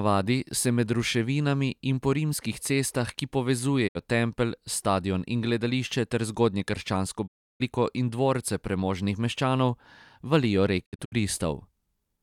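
Speech with three digital broadcast dropouts. The receiver loses frames and mutes, fading out over 20 ms. At 3.87 s the gap lasts about 64 ms, and at 7.26 s about 320 ms. From 10.84 to 11.14 s, short holes scatter. That audio is lost.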